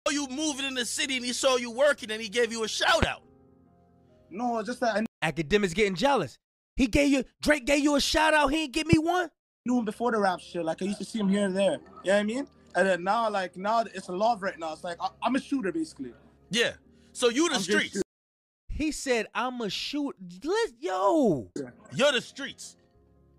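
The audio carries two loud pops, each a single sharp hit lasting under 30 ms, at 3.03–3.05 s and 8.93–8.96 s, peaking roughly 20 dB above the surrounding level while the sound continues underneath. The likely cause is a voltage step or pulse from a plug, switch or static discharge, shaped by the following circuitry into a thump. Unlike a dropout click, nothing is missing from the sound; the pop is added on top.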